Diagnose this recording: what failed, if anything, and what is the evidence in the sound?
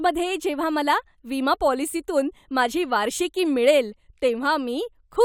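No fault detected anywhere.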